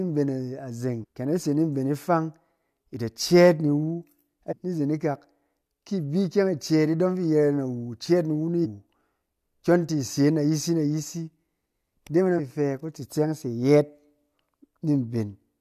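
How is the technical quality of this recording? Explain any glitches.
Four short glitches from damaged data in a compressed stream, at 1.02–1.05 s (just before "ken a"), 4.51–4.53 s, 8.64–8.66 s and 12.38–12.40 s. Corrupted bytes make the decoder misread frames and lose sync until it finds a valid header, so each spot sounds like a brief chirp or blip in the speech.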